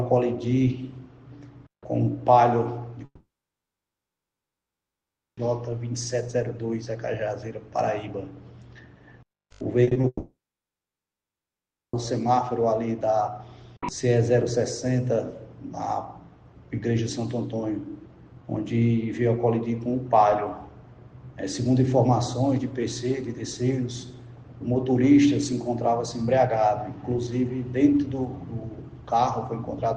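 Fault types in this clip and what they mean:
long network dropout: sound stops at 3.05 s and again at 10.07 s, each time trailing off as a brief fading buzz before about 2.2 s and 1.6 s of near silence; likely a network outage, with about 2.3 s and 1.9 s of audio lost before playback resumes further on.
repeated packet loss (robotic sound): between 9.83 and 10.05 s four short holes, the longest 40 ms, are each patched by stretching the preceding sound, so nearly half that span is synthetic fill and comes across choppy just before the second dropout.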